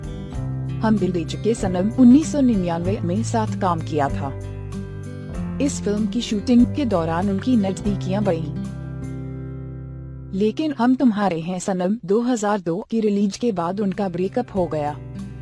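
No technical faults can be heard anywhere in this audio.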